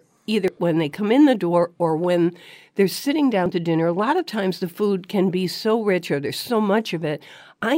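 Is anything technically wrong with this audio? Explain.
Yes. At 0.48 s and 3.46 s the speech jumps ahead, losing about 70 ms and about 20 ms respectively. This is likely a dropped buffer (overrun): samples were overwritten before being read, so the surrounding audio is spliced together with no gap.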